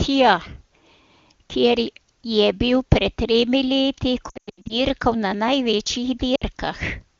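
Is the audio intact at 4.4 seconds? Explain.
No. Lost AMR speech frames hit from 4.29 to 4.80 s, after "bil pred tremi leti" and before "na največjih". Radio errors corrupted about 300 ms of frames, so the decoder repeated the last good settings with falling gain. The speech warbles and fades in runs up to 100 ms, then returns weak.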